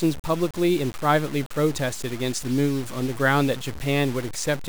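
Throughout the speech, the samples were likely cut down to only about 5 bits and truncated rather than rounded, with no dither, which is low bit depth without dither. The coarse steps leave an error that tracks the signal itself, sitting only around 15 dB below it, so the whole clip carries a grainy, rasping distortion that changes with every sound. Quiet passages and decaying tails break up into gritty sputter or fall abruptly to silence.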